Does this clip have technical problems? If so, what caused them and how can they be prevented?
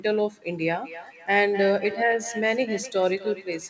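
Yes, there's a feedback echo between two devices running from 0.61 s right through to the end. Two devices in the same room are on the call, so one plays back what the other's mic sent, and that mic hears it again. Its echo canceller only cancels its own playback, so the sound keeps coming back roughly every third of a second, peaking at about 14 dB below the direct speech, under audio that tops out at 8 kHz, which fits a wideband codec like G.722. To prevent it, mute the mic and speaker on all but one device in the room, or have everyone use headphones.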